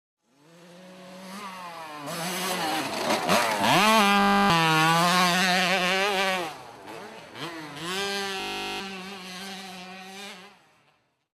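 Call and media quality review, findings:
System hang loop, twice: 4.2–4.5 s and 8.4–8.8 s. Steady 50 Hz buzz, which is the same 20 ms chunk repeating (15 and 20 passes). Probable component is the driver or host stalling while the output kept replaying its ring buffer, which fits a buffer of about 20 ms. Roughly a third of a second of real audio gone at the first, about 0.4 s at the second. Worth checking the audio thread scheduling.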